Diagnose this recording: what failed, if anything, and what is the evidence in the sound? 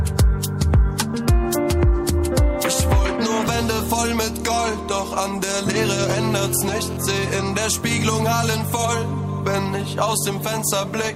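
The analogue stage picked up GSM phone buzz from 6.11 to 6.97 s: a hard, raspy buzz at 217 Hz carrying a dense series of harmonics, sitting about 18 dB below the programme and bearing no relation to it. Its level holds steady across that span, consistent with a handset in a call. The phone's burst transmissions were rectified by the audio circuitry, turning the radio pulses into an audible pulse train at the burst rate.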